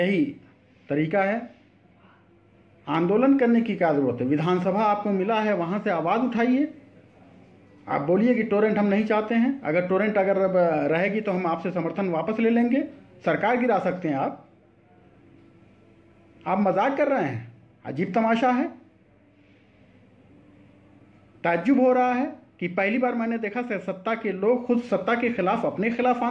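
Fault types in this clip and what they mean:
No faults can be heard.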